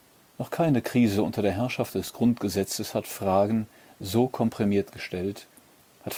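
A scratch on the disc wipes out more data than error correction can rebuild, once per revolution, so the player patches or mutes those samples. The result is CD scratch ticks: seven brief clicks between 1.34 and 2.44 s, about six a second, none longer than a couple of milliseconds.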